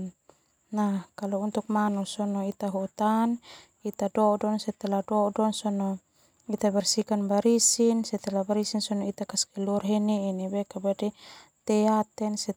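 Nothing in this recording stands out as a technical fault, so there's really nothing to flag here.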